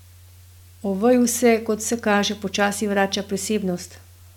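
Speech, with no audible faults.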